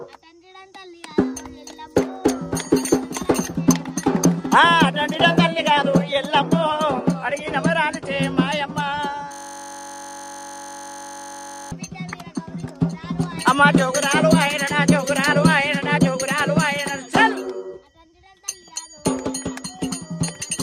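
At 9.32 s the audio locks into a system hang loop until 11.72 s: the machine stalls while the hardware keeps replaying one 21.33 ms chunk, which fits a 1024-sample buffer, over a hundred times, so you hear a steady buzz at about 47 Hz.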